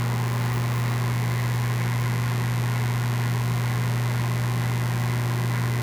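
Mains buzz runs through the whole recording of everyday sounds: switching spikes from unshielded wiring or a rectifier arrive twice per 50 Hz cycle, giving a raspy drone roughly 15 dB below the sound. A spectrogram shows stacked horizontal lines at 50 Hz multiples reaching several kHz; the waveform shows sharp spikes every 10 ms.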